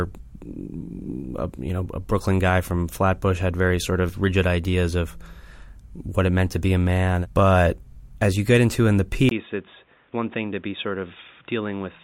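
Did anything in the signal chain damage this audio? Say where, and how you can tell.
Yes. Right after "get into in the", at 9.29 s, there's a 20 ms dropout, then the speech goes boxy, with nothing above 3.8 kHz, about 10 dB quieter, and a new noise floor roughly 35 dB down. That points to an input likely switched to a poorer device at the driver level.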